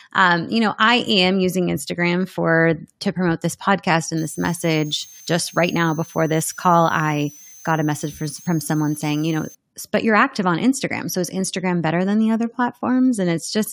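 A switching power supply running in an audible burst mode or beating with another one puts a switching supply whistle into this speech clip from 4.17 to 9.55 s: a thin high tone wandering between 5.9 and 6.5 kHz, sitting roughly 25 dB below the speech.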